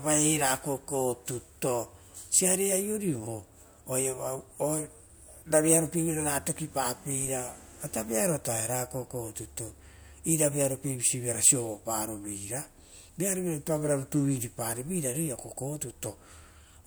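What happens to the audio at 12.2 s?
Nothing goes wrong at 12.2 s: the audio is intact at that moment, without any dropout, click, distortion or other audible fault.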